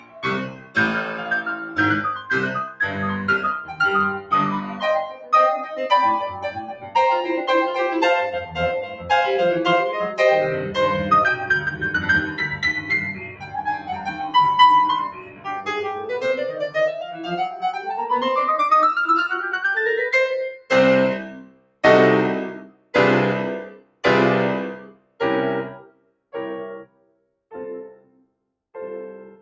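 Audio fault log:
Throughout: noise suppressor applied to music or sounds. A speech-tuned suppressor stayed active on this music, treating sustained tones and reverb as noise, so level swings by around 10 dB. Attacks pass while held parts sink, giving audible pumping and a thinned sound.
0.00–5.33, 6.47–6.95, 8.45–9.10, 12.82–16.10, 17.06–17.87 and 20.56–28.33 s: sound cut by the noise suppressor. Steady and decaying material was mistaken for noise and pulled down, by about 15, 11, 7, 14, 7 and 16 dB, so sustains dip and tails end early.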